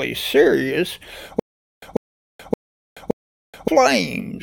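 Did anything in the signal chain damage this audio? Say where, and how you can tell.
Yes, at the playback or streaming buffer. From 1.40 to 3.68 s there is a stutter with silent gaps. A 143 ms burst repeats four times, every 571 ms, with about 428 ms of dead silence between. The player likely stalled, replaying its last fragment at each retry. The missing audio is gone.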